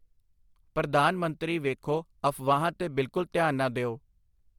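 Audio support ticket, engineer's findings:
Periodic clock jitter, throughout. Rough, metallic edge on the speech, gone in pauses. Converter sample clock modulated at around 100 Hz, likely interference coupling into the clock circuit. Each speech component gains sidebands spaced about 100 Hz either side, worse on higher-frequency content such as sibilants.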